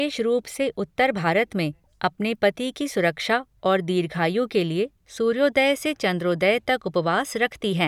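No technical faults are audible.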